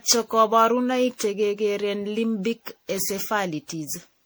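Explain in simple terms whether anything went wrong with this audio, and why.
Generation loss, throughout: the speech sounds swirly, hollow and smeared, likely because it was re-saved as MP3 about ten times, each copy adding damage.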